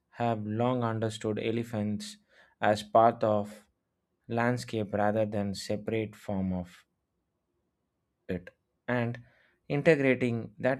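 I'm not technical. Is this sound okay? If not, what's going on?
Yes, it's fine, there's nothing wrong to hear anywhere in it.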